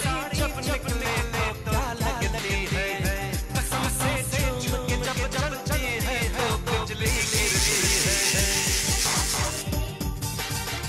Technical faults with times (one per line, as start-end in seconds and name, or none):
0.00-10.88 doubled audio track